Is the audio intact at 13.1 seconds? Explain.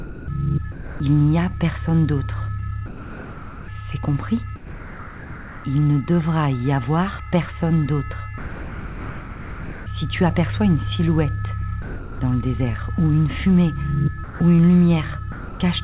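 Yes, the audio is intact at 13.1 seconds, with no fault at that moment, just the narrow, telephone-like sound of the call path, which fits G.711 A-law coding at 64 kbps with nothing above 4 kHz.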